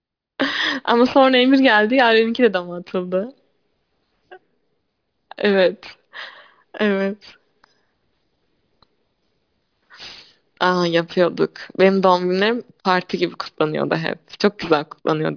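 Aliasing runs through the whole clip. The speech was resampled to a much lower rate with no filter first, which fits a drop to 11 kHz. Everything above 5.5 kHz folds back as false tones, about 25 dB below the speech. Sibilants sound gritty and metallic.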